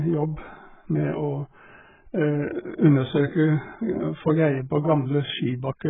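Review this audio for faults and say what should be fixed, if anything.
Throughout, the speech is dull with nothing above 3.8 kHz, smeared and warbling, likely heavy AAC compression at a very low bitrate, around 8 kbps. Encode at a higher bitrate to keep the full bandwidth.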